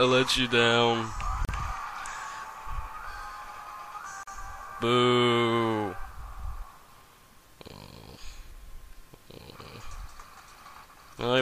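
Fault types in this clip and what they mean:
Gap at a join of encoded pieces: The audio was encoded in separate sections and then joined without trimming. Each section keeps its encoder's leading delay and its padded final frame, so silence is left at the seam. Here the sound drops out twice, from 1.45 to 1.49 s for about 38 ms and from 4.23 to 4.27 s for about 42 ms. The codec smears the edges. The sound then resumes where it stopped.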